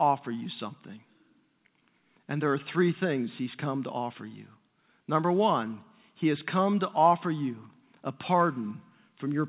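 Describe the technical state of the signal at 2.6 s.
At 2.6 s the speech is intact, with no dropout, click or distortion, just the narrowband sound of the call path, which carries nothing above 4 kHz.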